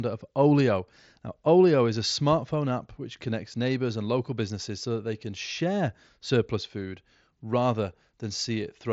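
No technical faults are audible.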